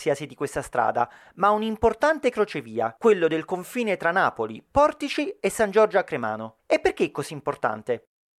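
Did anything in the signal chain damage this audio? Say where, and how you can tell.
No, no signal-chain damage heard.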